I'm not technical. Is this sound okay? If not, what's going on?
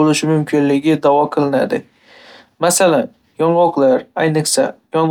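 Yes, no faults to report.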